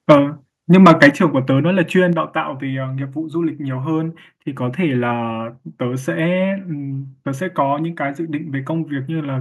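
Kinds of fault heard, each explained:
Microphone overload: peaks flatten against the converter ceiling, adding a harsh crackle near 0.1 s and from 0.74 to 1.08 s, likely from excessive input gain.
Microphone volume stepped down: the level drops abruptly by about 3, 6 and 4 dB at 0.12, 1.11 and 2.13 s, likely automatic input-gain reduction reacting to clipping.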